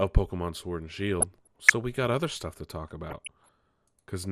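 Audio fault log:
Throughout: MP2 compression. The speech sounds dull, with a gurgling, granular texture. Upper sub-bands drop out and flicker, and the remaining bands are coarsely quantised. This is likely MPEG Layer II coding at a low rate, fitting roughly 80 kbps.
0.98–1.73 s and 3.10–3.49 s: DAB burbling. Short blips of noise in single sub-bands come just before "we got other stuff" and just after "other stuff to talk". Uncorrected bit errors corrupt samples and scale factors, so individual sub-bands jump in level for up to a frame.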